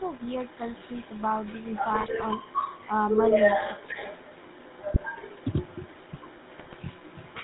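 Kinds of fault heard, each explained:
GSM full-rate codec: Buzzy, gravelly speech with nothing above 4 kHz throughout, which fits the 13 kbps full-rate coder rebuilding the voice from sparse pulse excitation.
Echo leak: A delayed copy of the speech trails about 185 ms behind, only slightly quieter, likely from a speakerphone whose echo canceller let the far-end sound back through.
GSM bit errors: Brief squawks and gargling at 1.92–2.09, 4.92–5.11 and 6.58–6.77 s, where corrupted bits distorted the decoder's filter, pitch and gain values.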